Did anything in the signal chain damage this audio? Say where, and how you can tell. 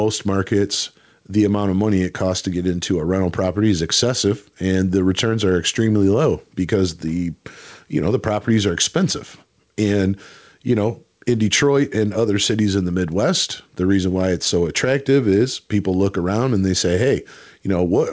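Yes. Gain pumping runs through the whole speech clip: the level is pulled down on every loud sound, a swing of around 5 dB. That points to the input gain sitting far too high, with a fast limiter or compressor likely clamping every loud syllable. Loud and quiet passages end up squeezed together, giving a flattened, squashed texture over the 8 kHz-limited G.722 band.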